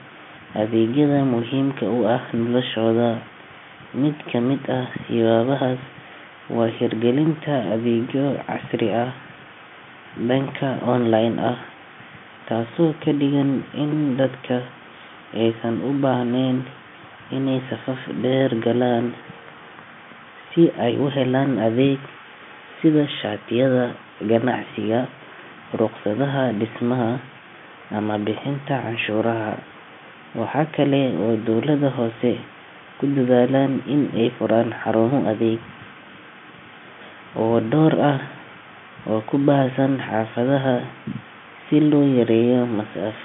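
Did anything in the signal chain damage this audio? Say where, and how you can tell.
No, nothing in the chain damaged it; the speech sits in a telephone band of roughly 150 Hz to 3.5 kHz with nothing above about 3.7 kHz, which is just the normal ceiling of G.711 telephone coding on the line.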